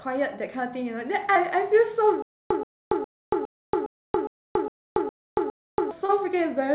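At 1.34 to 1.37 s there is short concealed packet loss. About 20 ms of the call arrived too late, and the receiver bridged roughly 14 ms by extending the preceding sound before blending back, leaving a brief smear. It recurs at 6.05 to 6.11 s, where about 40 ms went missing and some 32 ms was synthesised, so the wobble is longer.

From 2.22 to 5.91 s there is a stutter with silent gaps. A 128 ms fragment replays nine times at a steady 410 ms spacing, each followed by about 282 ms of digital silence. This is likely a stalled stream that repeated its last chunk at each retry, and the audio due in that span is lost. Throughout, the narrowband call path carries nothing above 4 kHz.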